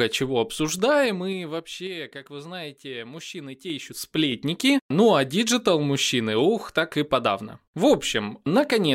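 A level change applied in unsmoothed 3 dB steps causes zipper noise from 0.65 to 1.95 s, pulling the speech down roughly 15 dB at about four steps a second, then from 3.62 to 4.37 s raising it back at about seven steps a second, each step ticking audibly.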